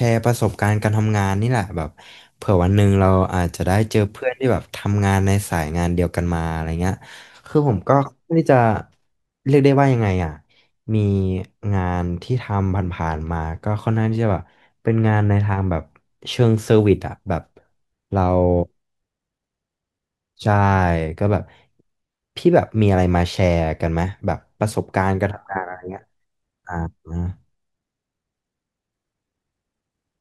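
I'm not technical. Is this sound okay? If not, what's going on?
No. From the start to about 7.47 s there is pre-emphasis left on: the treble was deliberately boosted, in the style used for FM broadcasting, and the matching step that should undo it never happened. So the speech sounds thin, harsh and hissy, with exaggerated s sounds.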